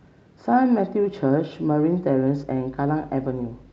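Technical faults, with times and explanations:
Listening through the speech recording turns up no technical faults. There is nothing to list against any time.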